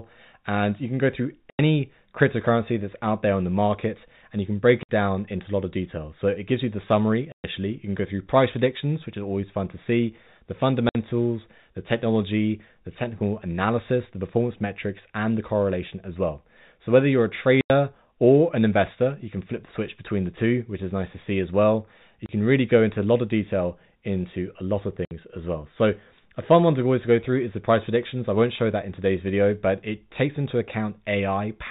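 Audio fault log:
1.5 to 25.1 s, packet loss filled with silence: seven dead holes in the speech at 1.5 s (90 ms, between "you can go through" and "cryptocurrency that's out there"), 4.83 s (60 ms), 7.32 s (120 ms), 10.89 s (60 ms, right after "fun to see the"), 17.61 s (90 ms), 22.26 s (30 ms) and 25.05 s (60 ms, between "into a lot of" and "as well"). Every gap is a multiple of 30 ms, which points to 30 ms packets being dropped. The receiver plays straight silence in their place, so each hole has hard edges.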